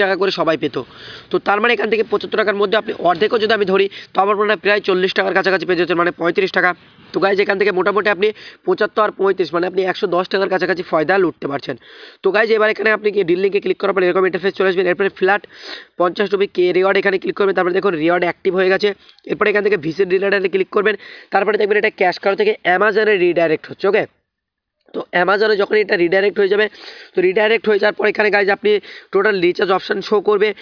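Nothing here stands out as a technical fault; there's no moment where the audio stumbles or goes wrong.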